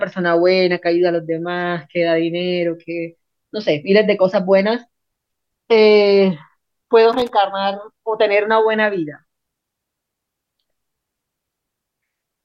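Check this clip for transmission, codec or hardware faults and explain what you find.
One hardware fault is present: loose connector crackle from 7.13 to 7.29 s in this speech recording. A worn or dirty contact somewhere in the cable path is shifting and repeatedly losing and regaining contact. Each break briefly chops the signal, and any DC on the line turns the reconnections into pops. For about 0.17 s the sound breaks into an irregular, scratchy burst of crackle.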